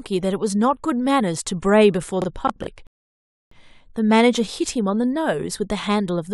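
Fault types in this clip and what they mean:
processor overload crackle: The processing could not keep up with its audio deadlines, so for just under half a second, from 2.22 to 2.67 s, the speech breaks into a gritty crackle. Several missed buffers, which fits blocks of around 20 ms, were filled by replaying stale audio with hard edges. On a waveform this shows as a run of abrupt steps and repeated short segments; a spectrogram shows thin vertical broadband streaks across the speech.
rebuffering stall: The player ran out of downloaded audio and waited for more. From 2.87 to 3.52 s the speech drops to silence for about 646 ms, then picks up exactly where it stopped, so nothing is lost but that time is added. The waveform shows a flat gap with a sharp cutoff and restart, and the spectrogram shows an empty column between two otherwise continuous sections of speech.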